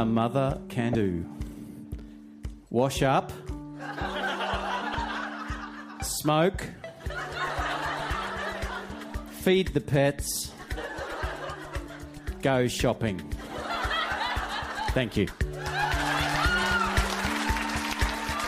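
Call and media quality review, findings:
Damaged data in a compressed stream, 0.92–0.95 s: short blip, about 30 ms. Decoder misreads corrupted frames, loses sync and hunts for the next frame header. Spectrogram: narrow vertical smear of broadband energy; waveform: abrupt discontinuity.

Same fault, 4.91–4.95 s: matching 30 ms blip, same corrupted-frame and resync mechanism in the decoder. Broadband stripe on spectrogram and hard edges in the waveform, pointing to a fault upstream in the stored or transmitted stream.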